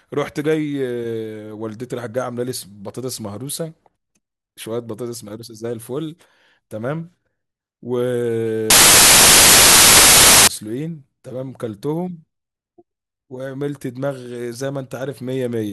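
A speech recording carries one serious fault: from 8.70 to 10.47 s, about 1.8 s in all, the samples are built from the wrong bytes. The reader misassembles each sample, so the rapidly varying low-order bits end up as the dominant part of every value, and loud, harsh broadband noise replaces the speech. A spectrogram shows a solid, flat band across all frequencies there, and the waveform turns into a dense block.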